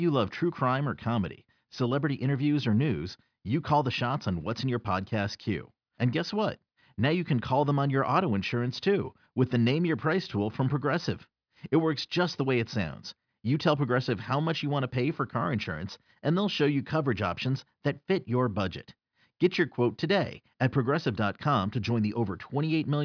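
Listening closely to the speech recording, nothing stood out as a technical fault at any point.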